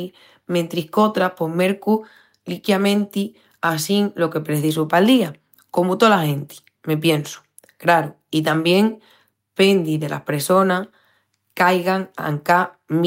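No technical faults can be heard anywhere in this speech recording. Nothing in the audio needs a timestamp or further comment.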